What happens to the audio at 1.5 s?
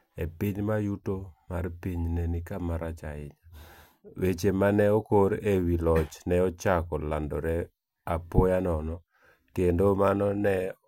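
Nothing goes wrong at 1.5 s: the speech carries on intact there, with no dropout, click or other audible fault.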